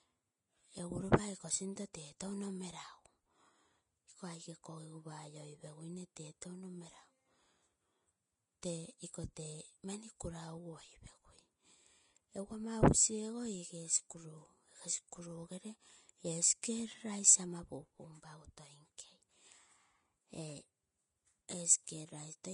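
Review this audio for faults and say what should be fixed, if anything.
The speech has a hissy, grainy treble throughout. Nothing is heard above 10.6 kHz. This is likely Vorbis compression at a low setting, which fits a bitrate near 31 kbps. Coarse quantisation has turned fine high detail into noise. Encoding at a higher quality setting prevents it.

Pre-echo occurs at 1.93, 8.62 and 16.62 s. A brief hiss of 11, 11 and 14 ms leads each sharp attack. The codec spread its quantisation noise across a whole block, filling the quiet moment before the onset. A higher bitrate with shorter transform blocks prevents it.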